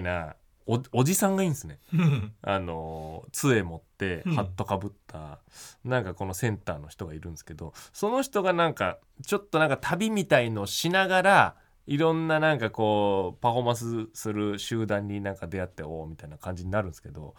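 Speech recording with no audible technical faults at any point.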